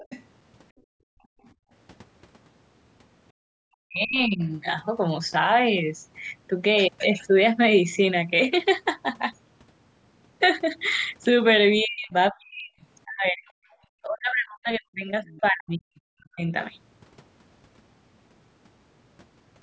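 Right from the start, 0.0 to 0.23 s, there's a faint second voice underneath, likely the other side's voice leaking through, sitting roughly 20 dB below the talker. It pops up again in scraps at 4.43 to 4.48 s and 13.45 to 13.51 s, and more clearly from 15.26 to 16.0 s, still well under the main voice.

Between 0.72 and 1.71 s the room tone drops away by as much as about 40 dB. That's background gated by the echo canceller, clamping the mic while the loudspeaker plays. A much shallower dip of about 13 dB shows up at 13.71 to 13.75 s.

From 3.33 to 4.43 s the talker's own voice sinks by up to around 40 dB. It's likely speech suppressed in double talk, with the canceller muting both sides when they overlap. The longer stretch from 11.82 to 16.44 s does the same, with about 3 s of it chopped or dipped. Through all of this the audio tops out around 8 kHz, which is normal for call mic processing.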